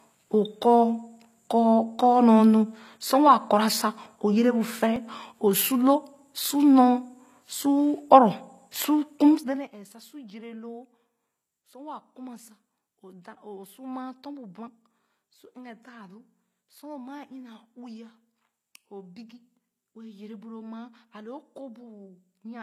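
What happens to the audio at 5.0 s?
At 4.96 s a dropped buffer (overrun) has cut a sliver out of the audio, just before "o sor". The likely cause is that the capture program fell behind, so the hardware overwrote samples before they were read. A few milliseconds are lost and the two sides are butted together. Unlike a dropout, there is no gap of silence: the sound simply jumps forward.

Throughout, including this moment, the speech carries plainly audible HE-AAC compression, likely at about 24 kbps. The upper band is not coded directly. It is rebuilt by copying lower bands upward and shaping them with a coarse envelope, so the treble sounds bright but synthetic, and s sounds turn gritty or lispy. That distinguishes it from a plain low-pass filter, which would just sound dull.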